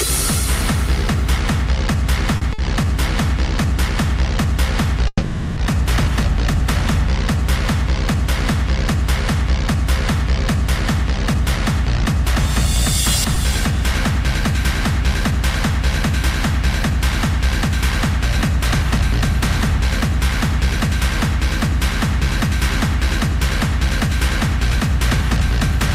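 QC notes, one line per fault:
2.37–2.43 s and 2.53–2.60 s: short stall from a late packet, twice. Each time a packet arrived late and the jitter buffer ran dry. The last sound was stretched, by 40 ms and then by 50 ms. Playback then resumed from the same point. Nothing is lost, but a sound is held too long.
5.08–5.59 s: call audio freeze. For about half a second, the last sound is carried on and fades. It ends in about 20 ms of silence. Then the audio picks up exactly where it stopped. This likely comes from packets held up in transit emptying the jitter buffer. A 490 ms gap is inserted, and nothing is missing.
10.82–20.77 s: jitter buffer speed-up. Over these ten seconds the receiver trims many pitch-period-length pieces, roughly 50 ms in total. This shrinks a backlog in the jitter buffer. The sound runs about 1% faster at unchanged pitch.
13.35 s: short concealed packet loss, inside the speed-up. 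About 20 ms of audio never reached the decoder. The receiver bridged the hole by extending the preceding sound and blending back into the real signal. A brief smear or wobble results, and a short sound can disappear.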